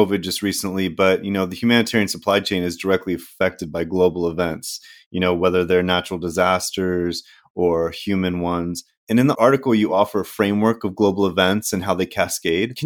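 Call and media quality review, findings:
No call or media quality faults found in this speech clip.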